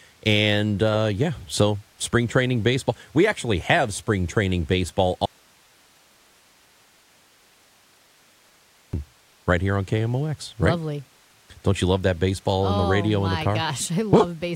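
At 5.26 s, after "have spring training baseball", an audio dropout to a faint residue leaves hiss until 8.93 s, likely upstream signal loss.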